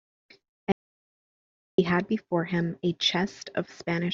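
At 0.72 s the speech cuts off abruptly into silence, with no room tone, and resumes mid-flow at 1.78 s. This is an audio dropout to silence, likely a lost input while recording continued writing silence, so about 1.06 s of speech is gone.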